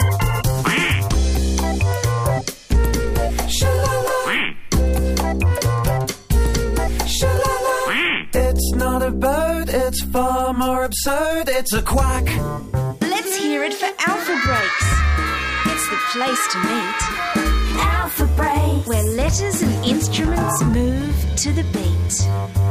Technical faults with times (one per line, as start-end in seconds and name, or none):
none